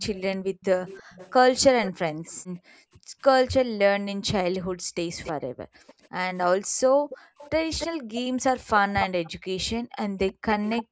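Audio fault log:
0.00–2.31 s, echo leak: a faint delayed copy of the speech trails about 322 ms behind the main voice, at roughly 20 dB below it. This is likely the far side's loudspeaker sound reaching its microphone, with the echo canceller failing to remove all of it before sending it back.
0.43–0.55 s, background gated by the echo canceller: the room sound dips by about 16 dB, for roughly 70 ms in all. The canceller turned the microphone down hard while its loudspeaker was playing, then let go, so the background returns.
0.66–10.82 s, speech suppressed in double talk: the talker's voice dips, loses its top end or breaks into pieces, with drops of around 40 dB and about 1.5 s affected in total. This likely happened because the canceller could not tell its own talker from loudspeaker echo while both sides spoke, and turned both down.
4.53–10.84 s, echo leak: a second delayed copy of the speech follows about 285 ms behind, at about 15 dB below the main voice, so it is more noticeable than the earlier one. 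The likely cause is the same incomplete cancellation of loudspeaker sound picked up by the far-side microphone.
5.50–10.91 s, background gated by the echo canceller: the room sound drops away by up to about 40 dB, totalling around one second. The canceller clamped the microphone whenever its loudspeaker was active, and the background comes back when it releases.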